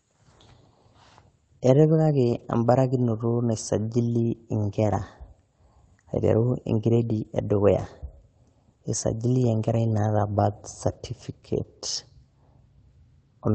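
At 2.23 to 2.45 s, and again just after "nai sajili" at 4.83 to 4.93 s, a lost packet rebuilt from error correction leaves no gap, but the audio turns briefly rougher and noisier. Those stretches would fit runs of six and three lost packets, each replaced by its low-bitrate copy. The waveform stays continuous, while the spectrogram shows grainier, smeared texture there. The Opus call path's coding limits content to about 8 kHz.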